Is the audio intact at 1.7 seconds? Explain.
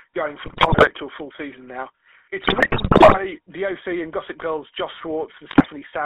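No. At 1.7 seconds the speech is running through the GSM full-rate codec, as it is for the whole clip. That codec models the vocal tract and feeds it a sparse, regularly spaced pulse excitation at about 13 kbps, and the line band sits around 300 Hz to 3.4 kHz. So what you hear there is a boxy, telephone-narrow voice with that plainly audible buzzy, gravelly roughness typical of the codec.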